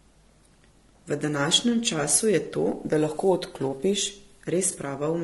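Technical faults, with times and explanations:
Throughout: low-delay AAC compression. The speech sounds rough and grainy. Noise fills the gaps between pitch harmonics, and the top band sounds thin and synthetic. Very short coding frames resolve harmonics poorly. This plainly audible damage likely points to AAC-ELD near 32 kbps.
4.71 to 4.75 s: AAC frame loss with concealment. About 20 ms of audio went missing, which fits one lost frame. The decoder filled the gap from the last good spectrum. The guess is imperfect, so a brief smeared, noisy patch is heard.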